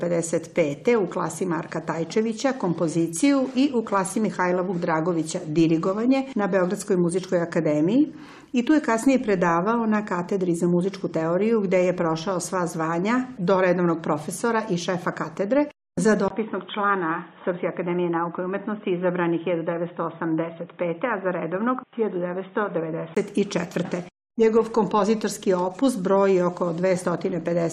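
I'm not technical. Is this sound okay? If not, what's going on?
No. From 16.28 to 23.17 s the sound turns dull and boxy, slightly quieter, with a brief gap and new faint hiss, likely an input switched to a poorer device.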